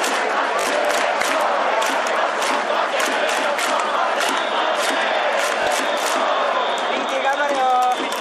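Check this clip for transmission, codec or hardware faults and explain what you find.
Bluetooth stutter occurs twice, at 0.61 s and 5.63 s, each lasting 40 ms. The receiver repeats its last buffer over lost packets, giving a brief buzz before the sound skips ahead.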